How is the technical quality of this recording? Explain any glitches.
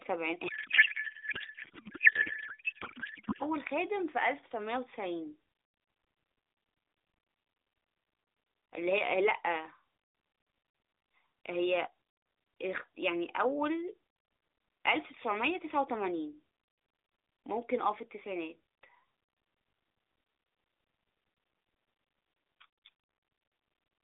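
The recording has one clear glitch near the start, heard through an AMR narrowband mobile path whose 300 Hz to 3.7 kHz band and light coding texture fit the 12.2 kbps mode.

From 0.48 to 3.43 s there is a codec payload misread. The decoder appears to be unpacking octet-aligned AMR frames as if they were bandwidth-efficient, so every field is shifted. The speech turns into garbled warbling noise that barely tracks it. On a spectrogram, formant structure becomes smeared noisy energy, and the waveform envelope stops following syllables.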